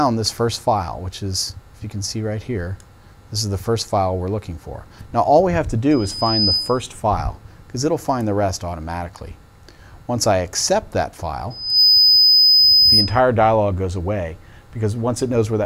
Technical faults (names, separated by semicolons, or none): loudspeaker feedback squeal